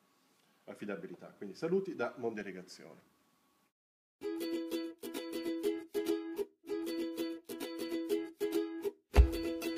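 Nothing is technically wrong with the audio in the clip.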